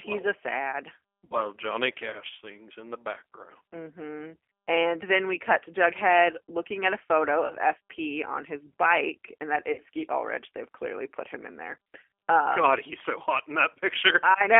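Throughout, the speech carries the signature of the G.729 codec, which fits the 8 kbit/s G.729A variant. The audio is confined to a telephone band of roughly 300 Hz to 3.4 kHz, and the damage is plainly audible as a rough, slightly synthetic texture. That texture comes from the codec rebuilding the signal out of a vocal tract filter, a pitch predictor and a handful of pulses per frame.

At 1.25 s, right after "a sad", VoIP packet loss concealed by the speech codec replaces about 60 ms of signal, consistent with three lost packets. The decoder extends its last pitch and filter state while turning the gain down, so the sound smears into a buzzy tone or a coloured noise that fades. The same happens at 7.46 s after "looking at a photo" (about 40 ms, fitting two packets) and at 9.72 s after "his bike and that" (about 60 ms). Because each frame builds on the one before, the sound stays weak or distorted briefly after each gap ends.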